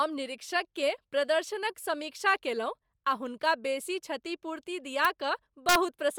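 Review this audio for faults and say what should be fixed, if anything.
Throughout the speech there is a grainy, breathy edge and nothing above 20.1 kHz. This is likely Bluetooth LC3 compression in 10 ms frames, at a rate that fits about 48 kbps. Raising the LC3 bitrate or avoiding the Bluetooth link for recording would prevent it.

Sharp, violent cracks occur at 5.05 s and from 5.69 to 5.76 s. This is integer overflow: peaks reaching full scale and then about 2 dB beyond it wrapped to the opposite sign instead of being limited. Saturating arithmetic, or enough headroom before the integer conversion, would prevent it.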